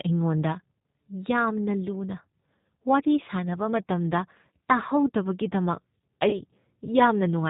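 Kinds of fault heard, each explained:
G.729 codec: The whole clip carries the sound of a low-rate speech codec, which fits G.729A at 8 kbit/s. This coder rebuilds speech from a short model of the vocal tract, a pitch predictor and a few pulses per 10 ms frame. It discards everything above 4 kHz. The damage is plainly audible. The speech stays intelligible but dull, slightly rough and synthetic.
VoIP packet loss concealed by the speech codec: From about 6.29 s to 6.42 s, 40 ms of audio went missing, which fits two lost packets. The decoder filled the gap by repeating its last pitch and filter settings at falling gain. This stretches the sound out briefly as it fades. Each frame depends on the one before, so the speech stays weak or distorted for a short while after the packets return.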